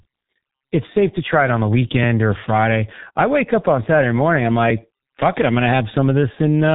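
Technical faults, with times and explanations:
Throughout, G.723.1 codec: everything above about 3.8 kHz is simply gone, so the speech is muffled, and the codec's slow-moving voice model at this heavy damage level leaves it hoarse with smeared consonants, which fits the roughly 6 kbit/s telephony mode.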